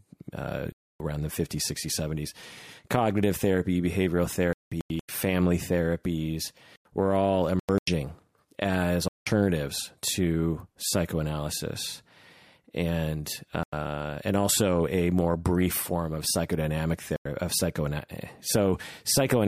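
Seven stretches of corrupt frames, 32 frames in all, are muted in this speech clip, at 0.72–1.00, 4.53–5.09, 6.41–6.85, 7.59–7.87, 9.08–9.27, 13.37–13.73 and 17.16–17.26 s. Damaged compressed frames were rejected by the decoder and replaced with silence, so each hole drops in abruptly without shifting the timing around it. On the waveform each shows as a flat, near-silent run with hard edges. On a spectrogram it is a clean vertical blank band across all frequencies.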